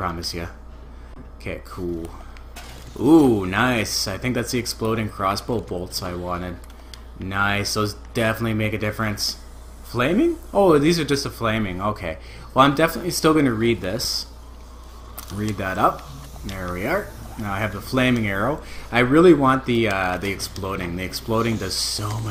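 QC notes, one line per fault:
1.14–1.16 s, underrun with held sample: the output buffer ran dry for about 23 ms, which fits one 1024-sample block, and the converter held its last value until data came back. The sound stops on a flat, held level, so the cut-in has little or no click. No audio was lost, so playback resumes where it stopped and the return is soft rather than a hard jump.
14.04 s, underrun with held sample: a shorter buffer starvation of about 3.6 ms. The output again freezes at the last value, giving a brief flat spot in the waveform. Playback continues from where it paused with nothing skipped, so both the stop and the return are soft.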